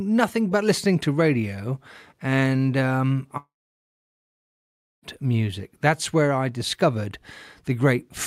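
From 3.37 s to 5.05 s, the incoming stream likely stopped arriving in a long network dropout. The receiver stretched the last sound into a brief fading buzz, then left about 1.55 s of silence. The speech returns at 5.05 s with 1.66 s of audio missing.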